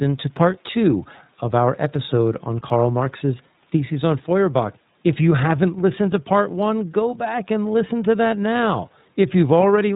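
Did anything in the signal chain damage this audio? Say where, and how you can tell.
Yes, at the codec stage: iLBC coding runs through the whole speech clip. Nothing passes above 4 kHz, a flat ceiling on a spectrogram, and the voice sounds audibly rough and synthetic. Each frame is coded independently, with 30 ms frames at roughly 13 kbps.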